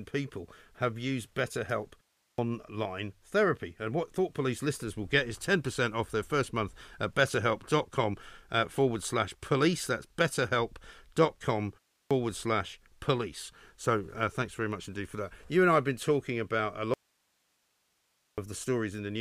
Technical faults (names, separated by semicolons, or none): clipped start after a pause; audio dropout to a faint residue